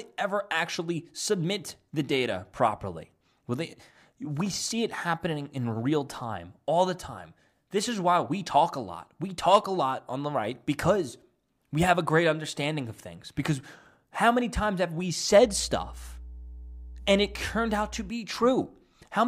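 A steady low drone at 60 Hz, with some low harmonics above it, rises under the speech from 15.42 s, just after "many times have we", and stops at 18.12 s. It sits about 15 dB below the speech. This is mains hum: for those few seconds a ground loop or a nearby transformer let the 60 Hz power line couple into the signal path, adding its tone to the speech.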